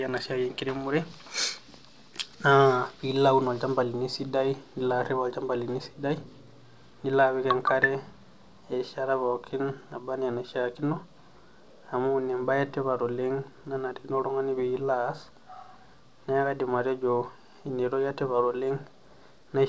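No technical faults are audible.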